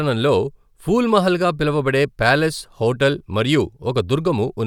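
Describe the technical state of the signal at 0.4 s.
At 0.4 s the speech signal is intact, with no technical fault present at that moment.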